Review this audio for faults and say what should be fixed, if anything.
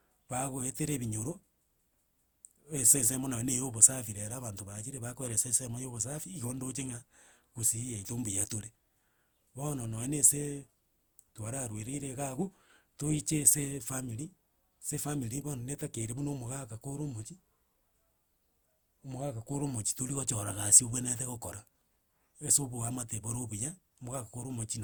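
The speech has a swirly, hollow, smeared quality throughout, with blurred consonant attacks, which points to generation loss, likely from encoding a few times over with a lossy codec like Opus at something around 64 kbit/s; content still reaches about 20.1 kHz. To prevent it, keep a lossless master and encode only once at the very end.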